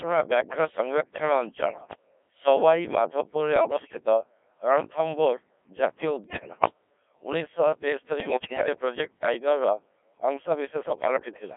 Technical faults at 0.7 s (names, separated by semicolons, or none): Codec 2 vocoder